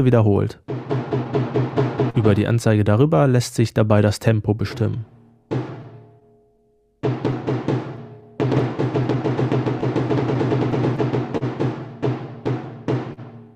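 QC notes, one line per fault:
Throughout: clock drift between sender and receiver. The far end's clock is running slow, something like 3% behind ours, so the jitter buffer keeps draining and the receiver has to pad things out to avoid running dry. You hear it as a faintly unsteady, slightly dragging pace with small hiccups that pop up at uneven spacing. There's no single spot to point at.
0.29–9.16 s: repeated timing corrections. This is the receiver responding to that drift by repeating short slices to keep in step. It plays at about 99% speed overall, and across the stretch it adds roughly a tenth of a second in total. Each edit is tiny and they all push the same way, lengthening the audio, so what you notice is a loose, slightly stretched tempo with the odd little stutter rather than any obvious jump.
1.24–2.17 s and 5.83–11.44 s: scattered short gaps. A handful of packets, about three in the first run and around fifteen in the second, didn't turn up in time. 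Each hole was covered by carrying the previous sound forward. None is longer than about 40 ms, and they make up only a small slice of each run, so nothing actually drops out. You get brief ticks and little smeared blips sprinkled through, more densely in the earlier run.
13.13–13.20 s: short stall from a late packet. One packet was late, the buffer emptied, and the receiver held the last sound for about 40 ms until the packet arrived. It then carried on from the same point, so nothing is lost, but the playout delay grows by that 40 ms. It comes across as a sound hanging on a touch too long with a faint buzzy or dipped quality.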